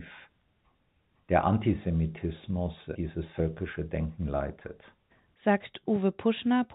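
No technical faults can be heard in this speech.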